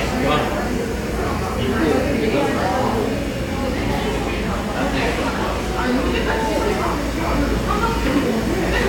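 Nothing in these sounds stood out as a technical problem on listening.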